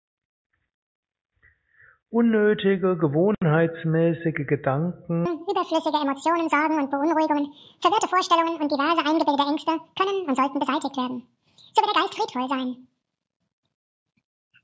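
Wrong sample rate: from 5.26 s to the end, the audio suddenly runs twice as fast and sits a full octave, 12 semitones, higher. The samples are being clocked out at double the rate they were captured at, with no conversion, so duration halves and every frequency doubles together. That 2.0 ratio fits material recorded at 8 kHz but played back as if it were 16 kHz.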